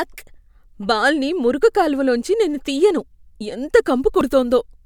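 At 1.63 s the speech jumps forward, losing roughly 10 ms, and at 4.21 s, just after "లోంచి నేను తియ్యను ఎంత", a similar skip removes about 30 ms. Neither gap contains silence; the sound on either side is butted together. The likely cause is a dropped buffer (overrun), where the capture side failed to collect a block of samples before it was overwritten.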